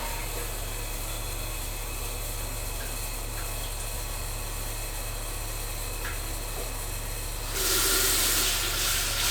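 There are no technical faults in this sound recording, so there is nothing to describe in time order.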